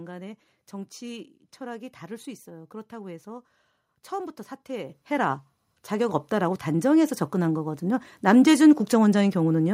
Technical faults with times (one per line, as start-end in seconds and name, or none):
4.89 microphone volume stepped up
6.09 microphone volume stepped up